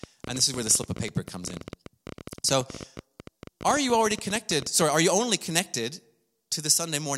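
A speech recording carries a train of clicks from 0.04 s to 4.83 s, about 14 per second at an uneven pace, around seventy in all. They sound like ticking over and between the speech, some peaking a few decibels above it. The likely cause is interference from nearby equipment or a faulty connection or power supply. On a spectrogram they appear as thin broadband vertical lines scattered irregularly; on the waveform, as sharp spikes of similar shape.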